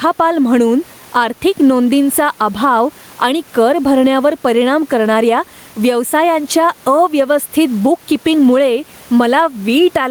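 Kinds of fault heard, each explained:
Gain pumping: throughout, the gain swings by around 10 dB, pulled down under each loud passage, with the room noise about 35 dB below the speech, likely a fast limiter taming excessive gain. Unlike a noise gate, the background never cuts out.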